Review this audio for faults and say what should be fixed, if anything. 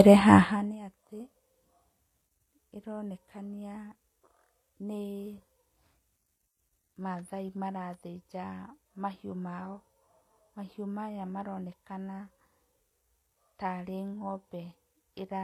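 Transcoding between lossy codecs runs through the whole speech clip. Nothing is present above 14.9 kHz, and two layers of coding artefacts are heard together. This fits a low-rate HE-AAC encode likely re-encoded through WMA 1, with the second coder spending bits on the first one's artefacts. Prevent it by encoding once, directly from the uncompressed source.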